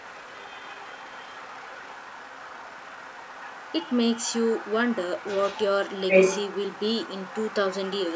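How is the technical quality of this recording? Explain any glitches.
The recording is compromised by the other side's voice leaking through, in three stretches: 0 to 4.73 s, 4.9 to 5.64 s, and 5.88 s to the end. A second, fainter talker sits beneath the main speech. It starts roughly 20 dB down, climbs to about 15 dB down, and reaches only about 5 dB below by the final stretch. The likely cause is an echo canceller that failed to remove the loudspeaker playback picked up by the microphone. On a spectrogram this appears as a weaker, overlapping set of harmonics.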